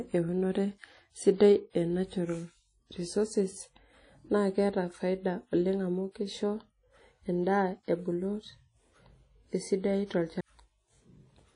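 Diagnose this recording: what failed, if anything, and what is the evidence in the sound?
The codec stage failed. The speech has a ringing, washy quality throughout, with a hiss that swells and fades along with the signal, and nothing is present above 10.1 kHz. Quantisation noise smeared across long transform blocks, plus a hard band limit, is the signature of low-bitrate transform coding. The likely cause is WMA compression, and the degree of damage fits an early WMA encoder running at around 32 kbps.

The storage or playback stage also failed, with a CD skip at 10.41 s. There is a brief mute lasting a few milliseconds, after which the audio resumes from a different point. The laser has jumped to another turn of the disc's spiral, so the player drops out briefly and then carries on reading from the wrong track position. That shows up as a discontinuity in the speech rather than a clean dropout.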